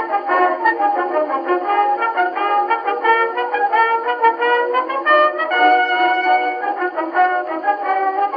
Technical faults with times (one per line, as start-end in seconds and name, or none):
none